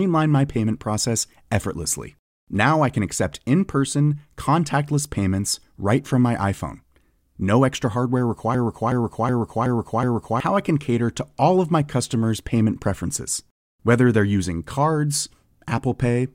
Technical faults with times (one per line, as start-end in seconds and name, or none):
8.54-10.40 system hang loop